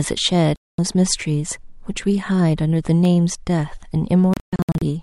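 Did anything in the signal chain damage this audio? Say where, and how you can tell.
Yes, in three places. A digital broadcast dropout, from reception at the receiver, mutes the audio from 0.56 to 0.79 s, about 224 ms gone. From 4.34 to 4.82 s it breaks into several short holes, 320 ms lost across 480 ms, the longest 128 ms. The gaps are clean silences of frame-like length, which fits seven and then ten lost frames muted after failed checks. Unlike clicks, whole stretches of sound vanish rather than being briefly blemished.

CD scratch ticks, from disc playback, appear between 1.26 and 3.05 s: eight tiny ticks, each only a few milliseconds, at a steady rate of roughly four or five a second. That regularity ties them to disc rotation, with the player patching samples it couldn't correct on each pass over the damaged spot. Random impulse clicks wouldn't keep such an even spacing, and these are far too short to be muted frames.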